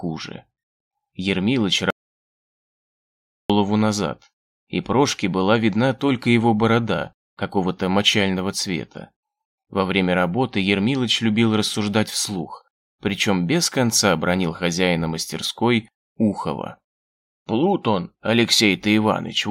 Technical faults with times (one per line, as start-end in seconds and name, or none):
1.90-3.50 audio dropout to silence